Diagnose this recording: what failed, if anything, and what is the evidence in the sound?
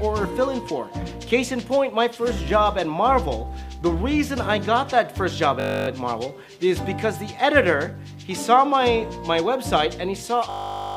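A steady 50 Hz buzz at 5.6–5.88 s and 10.5–10.96 s is a system hang loop: the driver froze while the hardware replayed one 20 ms buffer.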